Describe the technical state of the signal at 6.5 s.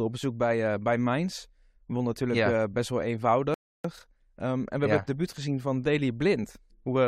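At 6.5 s the signal is intact, with no audible fault at that point.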